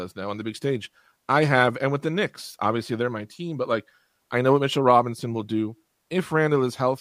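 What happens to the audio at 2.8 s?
At 2.8 s the speech continues cleanly, with no dropout, click, distortion or other technical fault.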